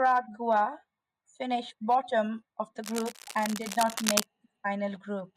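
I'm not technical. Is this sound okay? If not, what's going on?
No. From 2.82 to 4.26 seconds, right after "finished bottom of the", a harsh scratching and rustling sits over the speech. It is fairly loud, nearly as loud as the voice itself. This is cable scratch noise. It is likely caused by a worn cable or plug being moved during recording. A loose contact then flickers between good and poor, and each flicker adds a burst of crackle. It stops when the movement stops.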